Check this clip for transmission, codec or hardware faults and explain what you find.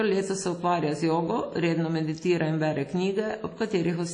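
One codec fault runs through the whole speech recording. The audio has likely been through WMA compression at a low bitrate, which fits roughly 32 kbps. Its long transform blocks spread quantisation noise across tens of milliseconds and discard weak components, leaving nothing above 10.1 kHz. The result is plainly audible ringing and washy syllables with a hiss that breathes with the signal.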